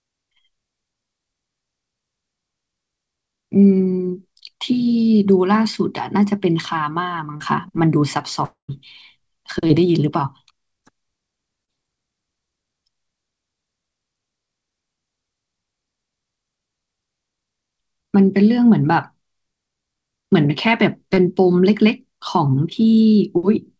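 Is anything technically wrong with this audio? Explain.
Yes. There are two kinds of fault in this speech recording.

Short concealed packet loss occurs at 7.37–7.43, 9.67–9.73, 11.65–11.70 and 21.14–21.20 s. Each time about 30 ms of audio failed to arrive, and the receiver extrapolated the preceding sound before blending back, leaving a brief smear or wobble. At 9.67 s the gap also stretches timing by a few milliseconds.

A long network dropout spans 8.45–8.71 s. Roughly 240 ms never arrived. The last sound continues as a fading buzz or hiss, then about 110 ms of near-silence follows before speech resumes further on. The likely cause is a burst of lost packets. Both faults sit on a call path whose band stops at 8 kHz, which fits 64 kbps G.722.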